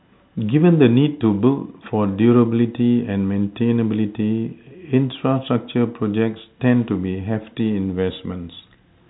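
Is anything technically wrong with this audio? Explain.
No, nothing technically wrong can be heard here.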